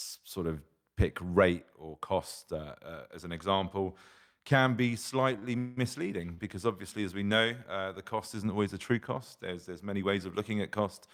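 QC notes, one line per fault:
5.33–5.79 s, repeated stalls (stutter), right after "an example can be": packets arrived late four times, draining the jitter buffer. The receiver held and extended the last sound for about 233 ms in all, half the span, longest gap 185 ms. Nothing is lost, but delivery drags and stutters.
6.34–6.40 s, short stall from a late packet, just before "because obviously as we": one packet missed its slot, so the buffer ran dry and the preceding sound was stretched by 36 ms until it arrived. Playback then resumed where it left off, leaving a briefly held moment with a slight buzz or dip.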